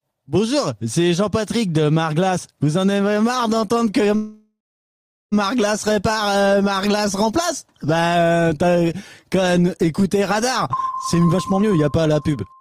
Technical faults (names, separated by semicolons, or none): call audio freeze; jitter buffer speed-up